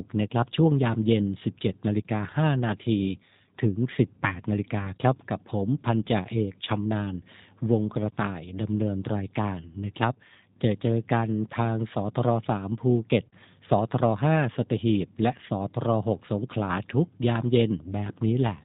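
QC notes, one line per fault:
throughout: G.729 codec. Plainly audible coding damage, consistent with 8 kbit/s G.729A, which rebuilds speech from a vocal tract filter, a pitch predictor and sparse pulses, giving a rough, slightly synthetic edge. A spectrogram shows a hard ceiling with nothing above 4 kHz.
4.79 to 4.90 s: VoIP packet loss concealed by the speech codec. The decoder extended its last pitch and filter across the gap, then faded it, leaving a brief stretched, fading sound and weakened speech afterward. This fits one lost 10 ms frame. The waveform shows a short patch with dipping amplitude.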